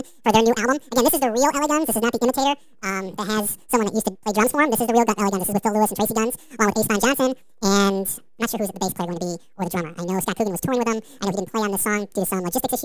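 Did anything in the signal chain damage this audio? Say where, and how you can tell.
Yes. The damage is at playback, and it is a wrong sample rate. From start to end, the speech runs twice as fast as natural and sits a full octave high, 12 semitones up. Speed and pitch shift together by exactly the same factor. That locked pairing is the tell. The samples were clocked out at a higher rate than they were captured, with no conversion. The 2.0 ratio fits 16 kHz audio being played at 32 kHz.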